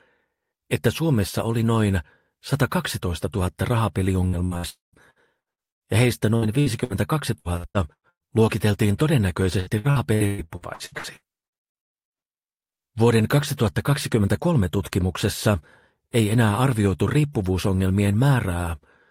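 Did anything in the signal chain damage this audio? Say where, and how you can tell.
Yes, the damage happened at the network stage. Between 4.27 and 8.31 s, and again between 9.60 and 12.44 s, the audio turns choppy. That is repeated packet loss, heard as robotic sound. The first stretch has about seventeen holes, the longest 110 ms, and roughly a quarter of it is concealment. The second has eighteen holes, the longest 130 ms, and about 40% is patched. Each hole is filled by stretching the last sound, which gives the buzzy repetition. Codec artefacts would smear the sound evenly rather than punch separate gaps.

Inside the first stretch, from 4.69 to 4.96 s, there is a longer break. It is likely a long network dropout. The sound is carried on as a fading buzz, then about 150 ms of plain silence follows, and the audio resumes with the missing portion simply gone. A single lost packet would leave only a brief, fully concealed blip. 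Here the concealment runs out and gives way to silence, which is why this reads as a sustained outage.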